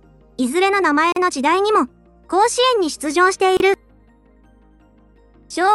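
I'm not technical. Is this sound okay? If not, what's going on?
No. The sound briefly drops out twice, at 1.12 s for about 40 ms and at 3.57 s for about 30 ms, then carries on where it stopped. This is a gap at a join of encoded pieces: separately encoded sections were stitched together with their built-in silent padding left in.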